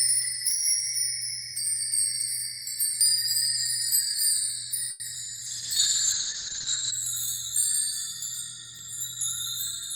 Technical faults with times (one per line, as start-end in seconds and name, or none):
3.01 dropped buffer (overrun)
4.14 dropped buffer (overrun)
4.91-5.02 short stall from a late packet
5.14-5.28 short concealed packet loss
5.48-6.98 call bitrate drop
6.12 dropped buffer (overrun)
8.79 dropped buffer (overrun)